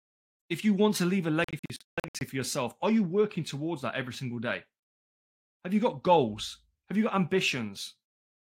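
Bluetooth dropout, from 1.44 s to 2.21 s: the speech breaks up into a cluster of short silent gaps with abrupt edges, adding up to about 469 ms of missing sound spread across roughly 768 ms, the longest single gap lasting 149 ms. The likely cause is audio packets failing to reach the headphones in time and being discarded, so each gap ends with the speech resuming further on, as though it had kept playing underneath.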